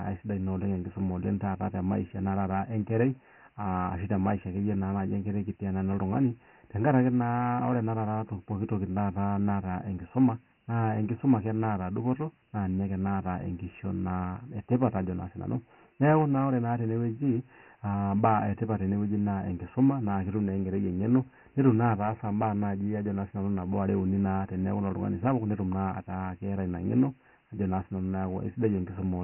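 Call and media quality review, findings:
Dialogic VOX ADPCM, throughout. Speech band-limited, nothing above 3.1 kHz; gritty hiss riding the speech. Spectrogram: hard ceiling at 3.1 kHz, noise smeared between harmonics. 4-bit adaptive steps at 24 kbps, pointing to 6,000-sample VOX storage, coarse quantisation, heavy damage.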